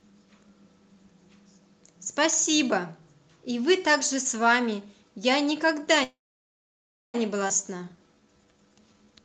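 At 6.03 s the sound stalls in a call audio freeze: a short fading buzz, then near silence until 7.16 s, likely packets held up so the jitter buffer ran dry. Nothing's lost, just about 1.1 s inserted. Right after, at 7.48 to 7.51 s, there's a skip ahead. Roughly 0.7 s of speech is gone, and the two sides butt together almost seamlessly. Then from 7.66 to 9.23 s comes a jitter buffer slow-down. Repeated pitch periods stretch the speech to 83% speed at unchanged pitch, adding 275 ms, with drawn-out sounds.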